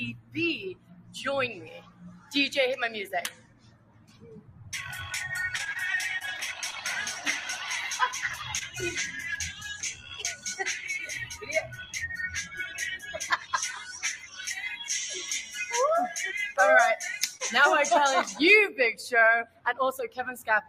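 A speech-tuned noise suppressor was left running over this whole clip, so it keeps treating sustained parts of the sound as noise and pulling them down. The level swings by around 15 dB, and held material pumps and thins while attacks get through.

The worst of it is sound cut by the noise suppressor at 0.12–2.32 s and 3.29–4.73 s. Steady and fading parts sink by up to about 17 dB and their tails get clipped short.

At 5.57–5.77 s there's repeated packet loss with that robotic sound. Four holes land close together, the longest 22 ms, with about 40 ms genuinely lost. Each gap is patched by extending what came before, so it comes out choppy and robotic.

Next is short concealed packet loss at 6.19–6.23 s, where about 20 ms went missing and the receiver papered over it with a continuation of the last sound. You get a quick smear or wobble.

At 6.71–6.74 s a short stall from a late packet holds the sound for about 19 ms while the jitter buffer waits. 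Nothing is lost, the sound is just held a little too long.

Another short concealed packet loss follows at 8.58–8.63 s, again about 20 ms missing.

The suppressor cuts again at 9.53–10.45 s, 11.29–13.53 s and 14.16–14.40 s, more gently this time at about 9 to 10 dB.

There's one more short concealed loss at 17.38–17.41 s and another late-packet stall at 19.19–19.23 s, held about 17 ms. Then from 19.45 s to the end the suppressor pulls the sound down by about 17 dB.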